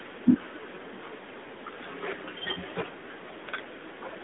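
Nothing in this speech recording stood out as a technical fault on listening.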